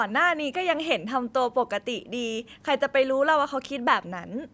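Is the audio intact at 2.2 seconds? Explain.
Yes, the speech at 2.2 seconds is intact, with no dropout, click or distortion at that moment.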